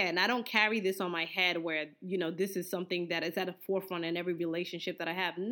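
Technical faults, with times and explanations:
No technical faults can be heard in this speech recording. There is nothing here that needs a time or an explanation.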